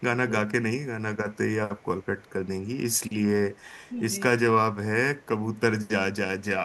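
From 0.26 to 0.47 s, the echo canceller likely mistook overlapping talk for echo, so speech is suppressed in double talk: the voice dips by roughly 15 dB in short pieces. Later, a loudspeaker-side canceller likely passed residual pickup back as echo leak, a very faint copy of the voice arriving 314 ms late at 1.33, 1.79 to 2.48, 2.91 to 3.13, 3.54 to 3.94, 5.2 and 5.54 s.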